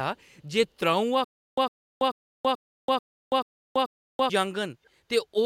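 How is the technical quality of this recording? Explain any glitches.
The recording has two glitches: a long stretch of stuttering near the start and a brief, faint echo near the end.

From 1.24 s to 4.30 s there's a stutter with silent gaps. A short burst of about 105 ms plays, then roughly 331 ms of dead digital silence, and the cycle repeats every 436 ms, seven times in all. That's most likely the player or stream stalling, replaying its last fragment on each retry and then running dry. Whatever audio belonged in that window is simply gone.

Then between 4.84 s and 4.90 s there's a quick echo leak, a delayed copy of the speech arriving about 495 ms late and very faint, way down under the main signal. This is likely one end of a call running on a loudspeaker, with its echo canceller letting a scrap of what the microphone picked up slip back through. Here it's just a brief, faint flicker.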